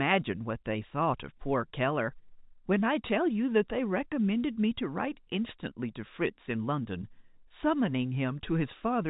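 No technical faults are audible.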